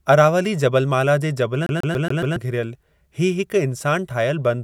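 A CD stuck on one turn hits this speech clip from 1.66 to 2.36 s. The same slice of about 140 ms plays five times in a row, each pass cut off by a brief mute where the pickup jumps back. The result is a rapid, evenly spaced stutter. It comes from a scratch that knocks the laser back a track at the same point on every revolution, so playback keeps returning to that spot instead of moving on.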